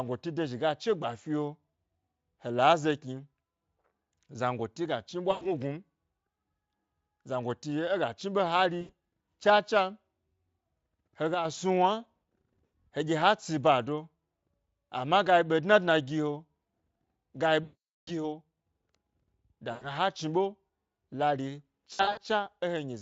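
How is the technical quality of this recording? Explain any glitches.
The recording is marred by repeated dropouts and one brief level dip, heard over Speex-coded speech whose own coding sounds clean.

At 5.31 to 5.54 s, just after "zangoti ga chni", and at 8.81 to 8.92, 12.69 to 12.73, 17.63 to 18.11, 19.71 to 19.90 and 21.93 to 22.19 s, the speech is stretched into a buzzy tone or a coloured noise that fades. This is VoIP packet loss concealed by the speech codec. The decoder extends its last pitch and filter while lowering the gain, and weakness lingers after packets resume. The longest gap, about 440 ms, fits roughly 22 lost 20 ms frames.

From 11.34 to 11.45 s the level abruptly drops by about 6 dB, then recovers. This is likely one channel dropping out before the stereo pair was summed to mono, so the shared signal lost half its contribution.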